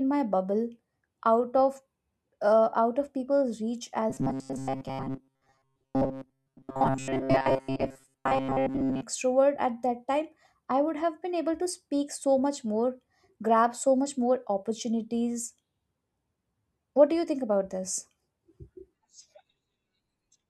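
From 4.1 s to 9.02 s the speech turns into a rigid, metallic buzz pitched at 134 Hz, still loosely tracking the words. This is robotic sound from repeated short buffers, likely caused by audio arriving too seldom, so playback loops the last fragment to fill the gaps. The buzz frequency fits a fragment of about 7.5 ms, and repeats replace most of the real audio here.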